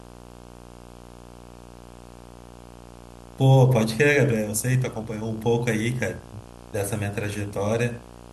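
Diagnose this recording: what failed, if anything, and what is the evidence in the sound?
The analogue wiring failed. Video or display buzz runs under the speech for the whole clip. It sits at 59.94 Hz, the field rate, with hash above it and a thin 15.7 kHz line-rate whine. It is roughly 20 dB below the speech. A screen or video cable is coupling into the audio lines.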